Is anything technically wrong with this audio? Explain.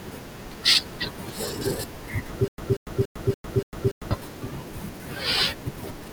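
Yes. From 2.48 to 4.11 s the speech becomes a stutter with silent gaps: a 186 ms fragment repeats six times, each followed by about 101 ms of dead silence, a steady 287 ms cycle. The likely cause is a stalled player replaying its last buffered fragment at each retry, so the speech meant for that stretch is lost.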